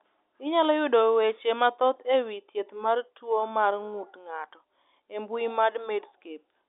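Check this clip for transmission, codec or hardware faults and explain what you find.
No transmission, codec or hardware faults can be heard: the speech comes over a normal G.711 mu-law telephone path at 64 kbps, confined to the line band of roughly 200 Hz to 3.6 kHz with nothing above 3.7 kHz, and any quantisation noise from the coding is faint at most.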